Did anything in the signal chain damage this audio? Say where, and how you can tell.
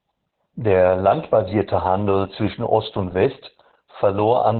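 Yes. Opus voice compression damages the whole speech clip at the codec stage. The band stops near 4 kHz, which fits the narrowband SILK mode used around 8 kbps. Its coarse excitation coding makes the voice muffled, hoarse and faintly robotic throughout.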